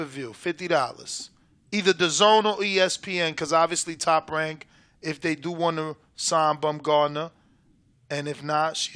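No technical faults can be heard anywhere in the recording.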